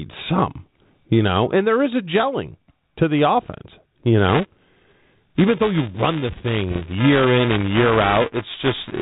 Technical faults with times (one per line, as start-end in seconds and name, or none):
0.76-0.89 bit errors on an ADPCM link
4.29-9.01 buffer tearing
6.71-6.81 bit errors on an ADPCM link